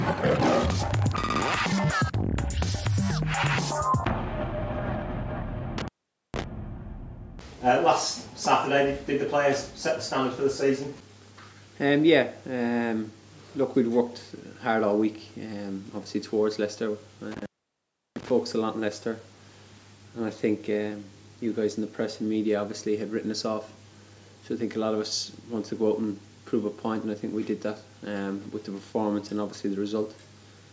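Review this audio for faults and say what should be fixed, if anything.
An intermittent contact drops the sound twice, from 5.78 to 6.44 s and from 17.32 to 18.30 s, with the line open for about 0.46 s and 0.70 s. A loose plug or cable briefly breaks the connection, so the signal vanishes, leaving only faint hiss, and crackles as the contact makes and breaks. On a waveform each dropout is a near-flat gap bordered by sharp spikes. On a spectrogram it is a dark vertical band edged by broadband clicks, sitting below the 8 kHz ceiling from the call's microphone processing.

Reseat or replace the suspect cable and connectors, and secure them with strain relief so movement cannot interrupt the contact.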